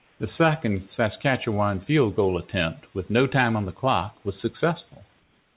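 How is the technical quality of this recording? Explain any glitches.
The one glitch here is comfort noise in place of the background, at the very start (0 to 0.2 s) and again at the tail (5.2 s to the end). In both gaps the real room sound gives way to a flat, featureless hiss, about 2 dB quieter than the background it replaces. That background already sits quite low, about 40 to 44 dB under the loudest speech. The likely cause is discontinuous transmission: the sender stops sending while nobody's talking, and the receiver fills the pause with synthetic noise. The whole thing is band-limited, with nothing above 4 kHz, which fits a narrowband G.711-style call codec.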